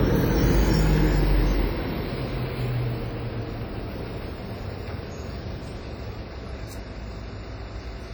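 From start to finish the audio carries heavy coding damage: a ringing, washy smear with a hiss that swells and fades along with the signal. That's likely WMA compression at a low bitrate, around 32 kbps, where long transform blocks spread quantisation noise over tens of milliseconds and weaker detail simply drops out. Nothing comes through above about 19.5 kHz.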